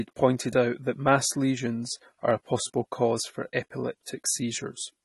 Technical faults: AAC compression

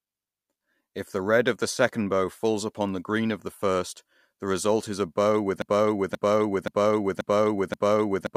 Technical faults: broken-record loop

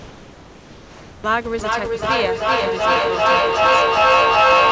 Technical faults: comfort noise in place of the background

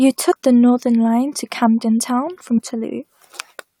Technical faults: damaged data in a compressed stream

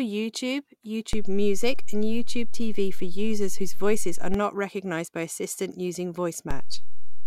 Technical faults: DC step

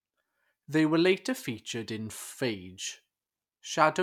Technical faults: none

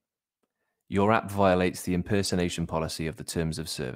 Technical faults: lost packet rebuilt from error correction

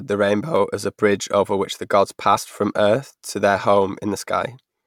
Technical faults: clock drift buffer slips; damaged data in a compressed stream

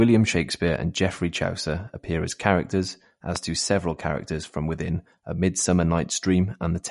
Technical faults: MP3 compression; loud pop

